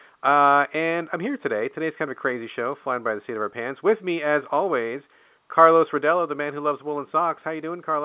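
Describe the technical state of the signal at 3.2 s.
At 3.2 s the speech is intact, with no fault present, only the narrow sound of telephone coding that passes nothing above 4 kHz.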